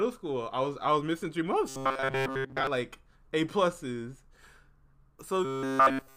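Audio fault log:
1.68 to 2.67 s, robotic sound from repeated short buffers: the speech hardens into a rigid, metallic buzz pitched at 134 Hz, still loosely tracking the syllables, with most of the stretch replaced by repeats. This is likely caused by audio arriving too slowly, so the playback keeps re-sending the last fragment, about 7.5 ms long, which fixes the pitch at one over that length.
5.45 s to the end, robotic sound from repeated short buffers: the same 134 Hz buzz returns, now with all of the sound made of repeats, so no natural speech comes through until the clip ends.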